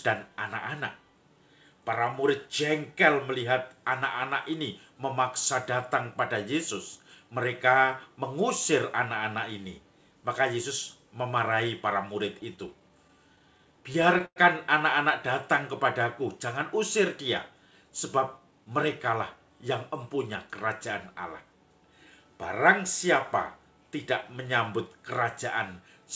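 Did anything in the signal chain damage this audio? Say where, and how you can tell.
Yes. Between 12.26 and 14.38 s the network path delivered packets late or too slowly, and the jitter buffer ran dry again and again: repeated stalls (stutter). Over that span there are more than a dozen short breaks. The receiver bridged each one by extending the last sound, fading it across the longest gap of about 102 ms. Roughly a tenth of the span is filler, yet nothing is lost. The audio drags and hiccups rather than dropping out.

From 17.83 to 18.67 s the jitter buffer held more audio than its target, so the receiver trimmed it back with a jitter buffer speed-up. It repeatedly cut pitch-period-sized slices, about 70 ms in total, and that passage plays at 107% speed. The pitch stays the same, but the sound audibly rushes for under a second. All of this rides on a call path whose band stops at 8 kHz, which fits a wideband G.722 codec.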